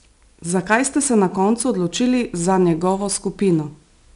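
From start to finish the speech carries 4-bit ADPCM compression, where each sample is squeezed into a coarse predicted step. You hear a gritty hiss riding on the louder syllables, and nothing above 10.6 kHz, which points to a low sample rate near 22 kHz.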